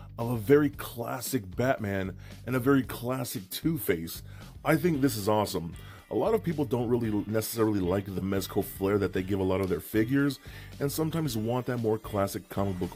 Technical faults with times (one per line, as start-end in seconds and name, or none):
none